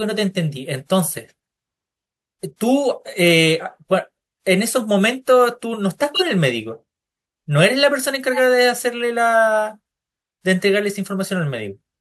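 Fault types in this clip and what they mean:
Corrupt frame decoded: flipped bits in a compressed frame were decoded as if valid, throwing energy onto the wrong frequencies. A loud, roughly one-frame burst hits at 6.14 to 6.23 s and a quieter, two-frame one at 8.33 to 8.40 s. Unlike a dropout, this adds stray sound.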